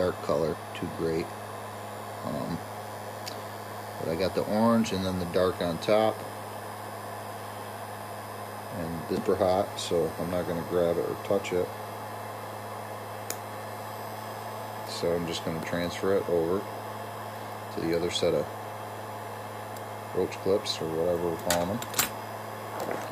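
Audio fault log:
0.54 s and 9.17 s: damaged data in a compressed stream. At each point, a short run of corrupted bytes makes the decoder misread the frames, lose sync and hunt for the next valid frame header, producing a brief glitch as it recovers. What sets it apart from a plain dropout or packet-loss gap is that the trouble comes from the decoder losing its place in the data and jumping ahead to the next frame it can read, rather than from missing audio being concealed.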